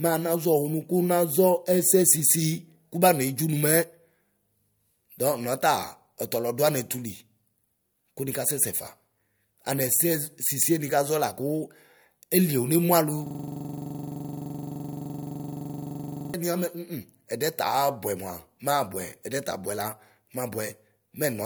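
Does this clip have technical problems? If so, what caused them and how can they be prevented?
Yes. From 13.27 to 16.34 s the speech locks into a rapid, machine-gun-like stutter: a 42.67 ms fragment repeats about 72 times at 23.4 Hz. This is a system hang loop. The computer or driver stalled while the audio hardware kept replaying the same ring buffer, which fits a 2048-sample buffer. Keeping the audio thread at real-time priority and using stable, current drivers prevents it.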